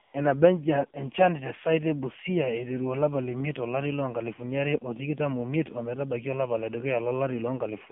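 A speech clip that's clearly been through an AMR narrowband mobile codec the whole way: the band is squeezed to roughly 150 Hz to 3.4 kHz, and the voice has that buzzy, synthetic edge that fits a low 7.4 kbps mode, where too few pulses per subframe are left to drive the vocal tract model. Right at the start, from about 0.02 to 0.14 s, there's AMR comfort noise: for 120 ms the phone sent no speech frames, so the real background drops out and a smooth, steady synthetic hiss fills the gap before switching off again.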